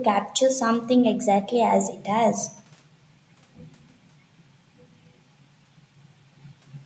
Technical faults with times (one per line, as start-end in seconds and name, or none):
none